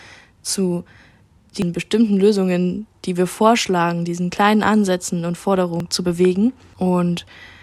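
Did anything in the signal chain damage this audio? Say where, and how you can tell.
Yes. At 1.62 s and again at 5.80 s the speech jumps ahead, losing roughly a tenth of a second or more each time. That points to a likely dropped buffer (overrun) at the driver or buffer stage, where unread samples were overwritten.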